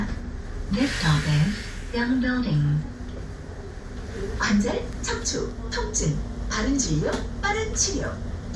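This recording of everyday sounds shows no technical faults anywhere in the signal.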